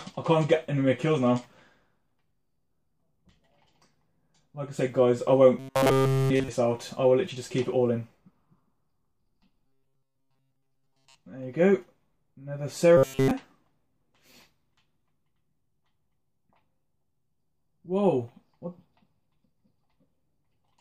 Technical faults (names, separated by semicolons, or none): robotic sound from repeated short buffers